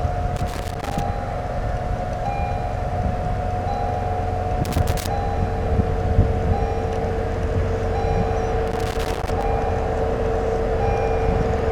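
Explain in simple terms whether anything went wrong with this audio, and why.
Loose connector crackle breaks into the audio three times: from 0.36 to 1.00 s, from 4.64 to 5.07 s, and from 8.67 to 9.43 s. Each burst lasts under a second and sounds like irregular scratching. It happens when a plug or cable contact is worn or dirty. As it shifts, the metal surfaces rapidly touch and lose touch, so the sound is chopped on and off many times in quick succession.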